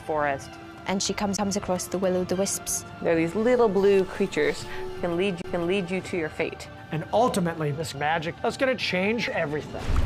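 A brief tick and a momentary dropout, about 20 ms at 1.37 s and about 30 ms from 5.42 to 5.44 s, each followed by the audio resuming from a different point. This is a CD skip: the laser jumped to another turn of the disc's spiral, muting briefly before playback continued.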